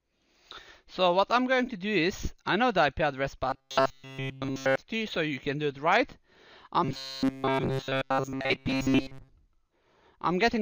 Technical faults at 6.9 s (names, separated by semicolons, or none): robotic sound from repeated short buffers